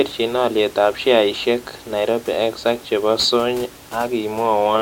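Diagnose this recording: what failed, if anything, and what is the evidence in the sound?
Nothing failed in this recording, and the sound gives no evidence of a fault, only room noise sitting about 22 dB below the speech.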